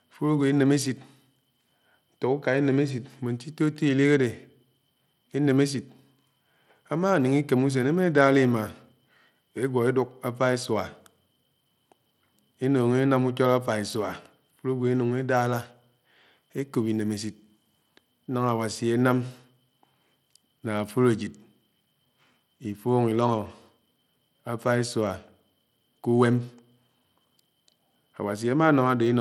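Throughout the speech, the treble flickers and a gritty, grainy noise rides on the sound. The likely cause is Bluetooth SBC compression with a small bit pool, which fits about 96 kbps, starving the upper sub-bands. A spectrogram shows blotchy, blinking high bands and nothing above 20.8 kHz.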